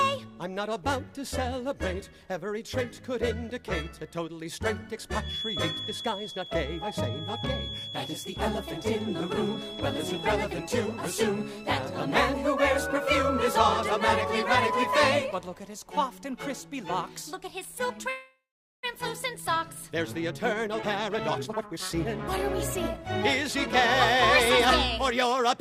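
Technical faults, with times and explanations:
5.18 to 10.37 s, feedback whistle: a thin, steady tone near 3.4 kHz sits roughly 10 dB under the sound for about five seconds, wavering a bit. Likely the speaker-to-mic loop is hovering right at the edge of feedback, so one frequency rings without building up.
18.09 to 18.85 s, call audio freeze: the sound stretches into a fading buzz and then goes quiet for about 0.44 s, then picks up where it left off, so nothing's lost. That's likely late packets draining the jitter buffer, adding about 0.74 s of delay.
20.15 to 22.28 s, 22.75 to 23.67 s and 24.98 to 25.54 s, jitter buffer speed-up: the audio hurries along at the same pitch, 127% speed in the first stretch and 106% in the other two. The receiver is trimming tiny pitch-period slices to work off that built-up delay, around half a second in the first stretch.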